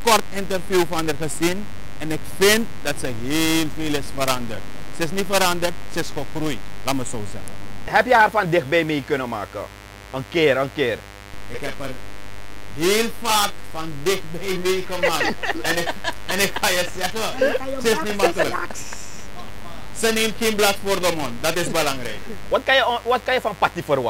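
From the first second to the last there's a steady mains buzz sitting roughly 20 dB under the audio. It's built on 50 Hz. Something like a dimmer, a rectifier or a missing shield has let sharp switching spikes into the chain, twice per mains cycle. That stacks up harmonics of 50 Hz that climb well into the several-kilohertz range, which is why you hear a raspy, edgy buzz rather than a smooth hum.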